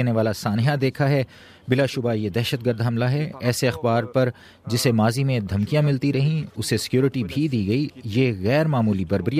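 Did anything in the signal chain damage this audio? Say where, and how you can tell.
No, nothing along the chain has left an audible mark on this audio. There is no point in the clip where any stage, from capture through to playback, can be heard altering the sound.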